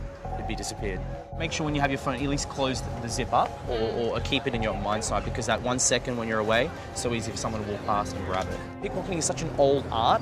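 At 5.58 s there is an underrun with held sample. The output buffer ran dry for about 2.5 ms. The converter kept putting out its last value until fresh data arrived. The waveform sits flat at that level, so the sound simply stops with little or no click. A few milliseconds of audio were lost during the gap. When playback resumes, the signal jumps to a new point.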